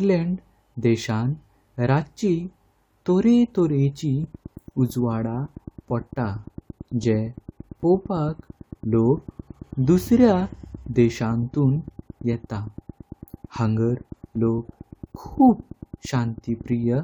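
From 4.24 s to 16.96 s a train of clicks runs through the speech at a regular 8.9 clicks per second, roughly a hundred in all, each near the level of the signal itself. The near-identical, evenly spaced ticks continue through pauses, pointing to likely interference from nearby equipment or a faulty connection or power supply.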